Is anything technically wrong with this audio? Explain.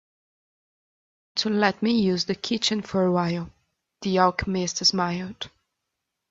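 No, nothing stood out as technically wrong on listening to this speech clip.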